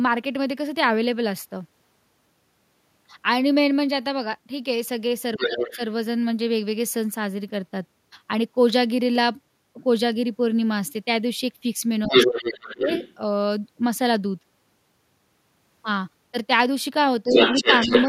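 At 5.38 to 5.78 s, 12.05 to 13.15 s and 17.29 to 18.07 s, the other side's voice leaks through. A second talker is audible at first about 5 dB under the main speech, then level with it, and finally about 5 dB above it. The likely cause is loudspeaker playback that the echo canceller left in the microphone signal. This is an added voice.

The opposite fault, speech suppressed in double talk, happens alongside each leak. At 5.39 to 5.79 s the main talker dips by roughly 10 dB, and at 12.06 to 12.87 s by about 20 dB. The dips are brief, at 17.24 to 17.35 s and from 17.84 s to the end. The likely cause is the canceller ducking both voices during overlap, so the main talker loses level while the other voice comes through.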